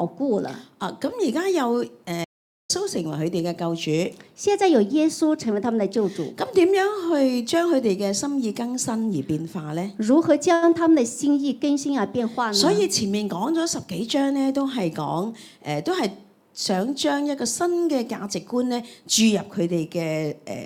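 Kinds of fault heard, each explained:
Audio dropout to silence: From 2.25 s to 2.70 s the sound stops dead for about 0.45 s and then resumes mid-flow. The gap is silent with no room tone underneath, so whatever occurred in that stretch is lost. The input feeding the recorder or encoder was likely cut off, through a disconnect, a broken link or an accidental mute, while the recording continued with silence.
Short stall from a late packet: At 10.53 s a sound is held for 86 ms longer than it should be, with a slight buzz or dip, before normal playback continues from the same point. A packet arrived late and the jitter buffer ran dry, so the receiver extended the last audio to bridge the wait. Nothing is missing, but the playback delay grows by 86 ms from here on.
Jitter buffer speed-up: Between 13.83 s and 15.06 s the sound plays at about 107% speed with unchanged pitch, giving a slightly rushed feel. 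The receiver's buffer had built up more delay than its target, so it repeatedly cut out short segments a pitch period or a few long. Together those cuts remove roughly a tenth of a second, trimming the latency back down.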